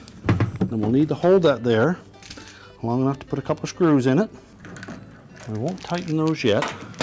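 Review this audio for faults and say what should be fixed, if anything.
From 4.9 s to 6.5 s the audio carries a steady train of small ticks, ten per second, riding on the signal. This is a resampler restarted on every block: the 48 kHz to 16 kHz conversion was run on each 100 ms block in isolation, so the filter at each block boundary had no real neighbouring samples to work with and left a small error there, giving one tick per block edge. The fix is to run a single continuous resampler whose filter state carries across block boundaries instead of being reset for each block.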